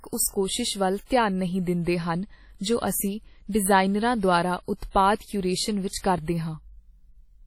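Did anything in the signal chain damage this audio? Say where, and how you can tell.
Yes, at the codec stage: heavy WMA compression, likely at a low bitrate near 32 kbps, leaves ringing, washy speech with breathing hiss throughout and nothing above 16.8 kHz.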